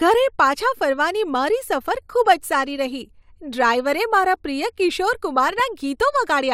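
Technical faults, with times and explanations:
2.03 s and 5.47 to 5.63 s, DAB burbling: brief bursts of burbling right after "મારા પ્રિય કિશોર" and earlier. Weak reception let bit errors, roughly a fifth of a percent, slip past error correction, so corrupted audio data puts short blips of noise in individual sub-bands.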